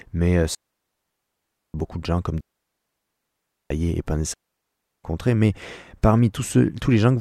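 A digital wireless link repeatedly lost too much data, so the receiver muted with a very short fade. This digital wireless dropout cuts the speech into clean, near-silent holes with no noise bursts: 0.55 to 1.74 s, 2.41 to 3.71 s, and 4.34 to 5.04 s.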